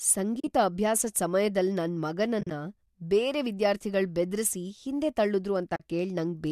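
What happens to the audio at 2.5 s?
Right after "ಅಭ್ಯಾಸದ್ ಸಮ್ಯದಲ್ ನನ್", from about 2.41 to 2.51 s, you get AAC frame loss with muting: roughly 60 ms of audio drops out, scattered across that 100 ms window, with the longest gap around 40 ms. The decoder zeroes the missing frames, and the overlapping windows fade the sound out and back in, so the holes are soft-edged. The spacing fits a few short frames from what is likely a low-delay AAC stream.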